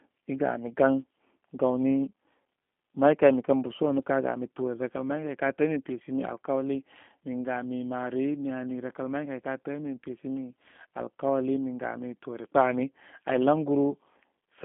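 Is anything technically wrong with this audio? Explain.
Yes. Throughout the speech, the sound is narrow and slightly rough, with a buzzy, synthetic edge and nothing audible above about 3.8 kHz. The band runs from about 200 Hz to 3.5 kHz. This is G.729 codec damage, plainly audible here. The codec does not store the waveform. It rebuilds each 10 ms frame from a vocal tract filter, a pitch predictor and a few pulses, which fits an 8 kbit/s G.729A stream.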